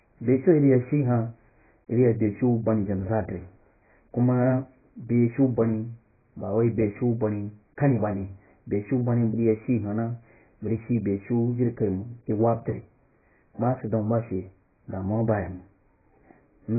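AAC compression runs through the whole speech clip: nothing survives above 2.5 kHz, leaving it dull and smeared with a warbling, fizzy edge on sibilants. The cause is likely heavy AAC-LC coding at a very low bitrate, around 12 kbps, discarding upper bands.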